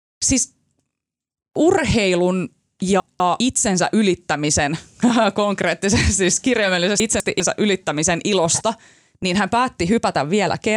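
A brief jumbled stumble in the speech at 3.0 to 3.4 s, and again at 7.0 to 7.4 s, is chunks out of order: in each case one 200 ms chunk arrived late and plays after its successor, so the two swap places, creating three abrupt joins.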